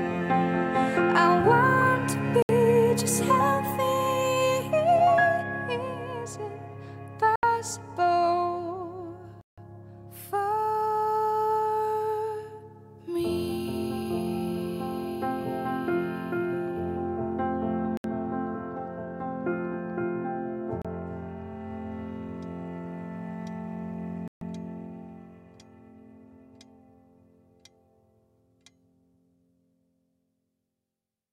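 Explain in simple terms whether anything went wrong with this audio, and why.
Bluetooth stalls at 2.42, 7.36, 9.41, 17.97, 20.82 and 24.28 s: the sound drops to silence for 30 to 160 ms, likely because interference delayed wireless packets and the headphones ran out of audio.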